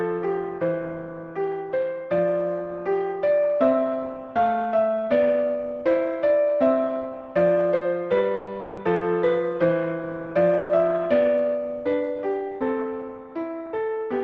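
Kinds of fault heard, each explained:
Burst of packet loss: Four brief gaps, at 7.75, 8.35, 8.95 and 10.57 s, where the receiver extends the last sound and fades it. The filled stretches last 60 or 120 ms. Each time, the audio resumes further on with that much missing.
Long network dropout: At 8.59 s the sound is continued and fades for about 180 ms, with no silence reached. It sits between two of the shorter bursts. The cause is likely a longer interruption of arriving audio, and that stretch is lost.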